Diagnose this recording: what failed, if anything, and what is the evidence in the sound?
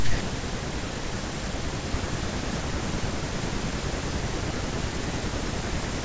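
Nothing in this recording points to a failure at any stage of the chain. The speech runs without any break or disturbance that would mark a fault.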